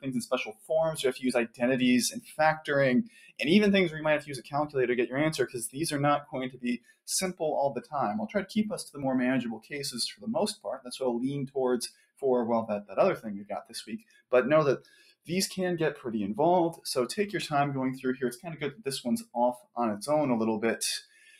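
A speech-tuned noise suppressor was left running on this material, so it keeps treating sustained tone, ambience and decay as noise to be removed. Its gain swings by roughly 10 dB through the whole clip, so the audio pumps and flutters: onsets get through at near full level while held parts and tails sink behind them, giving a thin, breathing quality. The specific cuts, where the noise suppressor pulled the sound down harder than its surroundings, fall at 0.0 to 3.4 s (about 19 dB at worst), 3.97 to 4.75 s (about 14 dB), 5.47 to 7.93 s (about 19 dB), 9.56 to 10.91 s (about 18 dB), 11.47 to 12.23 s (about 18 dB), 12.82 to 15.29 s (about 19 dB), 18.37 to 19.76 s (about 20 dB) and 21.06 s to the end (about 9 dB). In each, the steady or fading portions duck audibly and their decays are clipped short. Only a fraction of each span is actually dipped, from a few hundred milliseconds up to around a second and a half in the opening stretch. 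Separately, at 9.02 s and 17.42 s there is a small jump in the sound, with no gap of silence. That is the signature of a dropped buffer (overrun), likely from the capture side failing to read its samples before the hardware overwrote them, losing a few milliseconds and splicing the two edges together directly.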